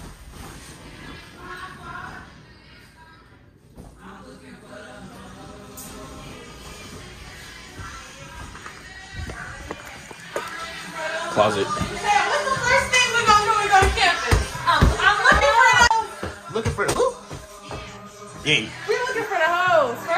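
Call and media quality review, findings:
Short concealed packet loss, 15.39–15.43 s: brief smear in the audio. About 20 ms missing, roughly 14 ms synthesized by decoder PLC. Spectrogram shows stretched, blurred harmonics or noise patch; waveform shows extrapolated signal, then crossfade back.

Short concealed packet loss, 16.93–16.97 s: second brief wobble. About 20 ms missing, roughly 18 ms filled by receiver concealment extrapolating prior signal. Spectrogram shows frozen, smeared partials or noise patch; waveform shows an unnatural stretch before rejoining.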